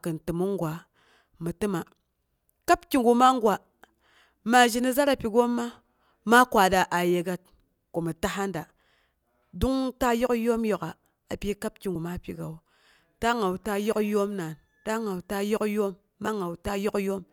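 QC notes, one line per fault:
11.95 s and 16.27 s, compressed frames skipped: the audio jumps ahead by roughly two frames and then one, which fits 32 ms frames, so about 70 ms and then 30 ms of audio are left out.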